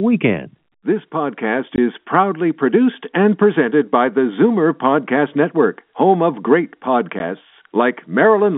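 Packets were lost and the receiver filled the gaps with silence (packet loss filled with silence). From 1.76 to 1.78 s, 20 ms drops out just before "is proudly produced and", and at 7.19 s a 10 ms hole follows "home of great", which fits 10 ms packets. Each gap has hard edges on the narrow telephone-band G.711 sound.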